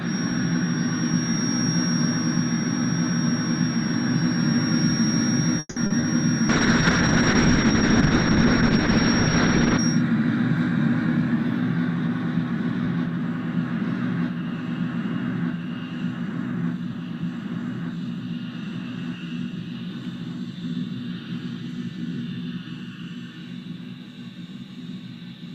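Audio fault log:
0.00–10.04 s, feedback whistle: A thin, steady tone at 5.6 kHz sits roughly 10 dB below the signal and swells and fades slowly in level. This is likely a loudspeaker-to-microphone loop held just at the edge of feedback, so one frequency rings on without building up.
5.59–5.93 s, call audio freeze: The last sound is stretched into a fading buzz for about 170 ms and drops briefly to silence. It then resumes where it stopped, with nothing skipped. This likely comes from delayed packets draining the jitter buffer, and it leaves playback about 170 ms later than before.
5.86 s and 6.01 s, short concealed packet loss: Two brief smears, about 40 ms and 20 ms long, where the decoder received nothing in time. The receiver extrapolated the preceding sound to fill each hole and then blended back, so the original material in those spans is lost.
6.50–9.85 s, call bitrate drop: The encoder rate falls from 64 kbps to 6 kbps and stays at the bottom for about 3.3 s. 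Audio bandwidth narrows from 20 kHz to 8 kHz, so the sound turns muffled and coarse, with a watery texture, until the rate recovers.
10.69–13.08 s and 16.23–17.90 s, jitter buffer speed-up: Playback runs about 4% and then 5% fast at unchanged pitch. Repeated removal of short pitch-period segments trims roughly a tenth of a second from each run as the receiver reduces excess buffered delay, which gives the second run a hurried feel.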